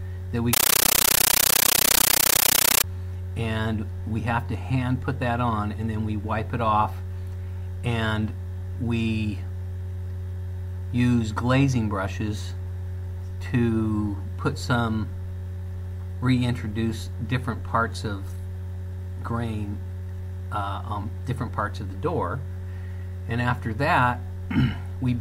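From 0.53 to 2.84 s, a compressed stream is played as audio: undecoded AC-3 data, consistent with a 640 kbps stream, becomes 13.3 ms noise bursts at 31.25 Hz, heard as loud, chattering static.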